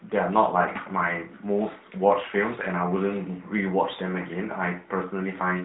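Nothing here trips any alarm: there's no technical fault to point to anywhere in this speech.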